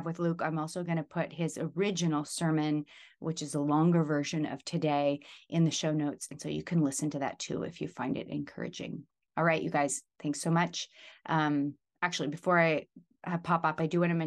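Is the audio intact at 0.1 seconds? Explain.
Yes, the speech at 0.1 seconds is intact, with no audible fault at that moment.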